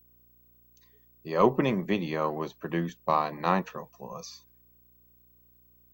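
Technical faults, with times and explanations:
Throughout, video or display buzz: a low buzz at 59.94 Hz with grainy hash above it and a thin whine at 15.7 kHz sit about 35 dB under the speech, as a display or video cable couples its field and line rates into the audio.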